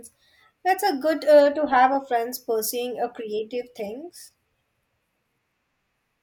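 A speech recording, and nothing is technically wrong with it.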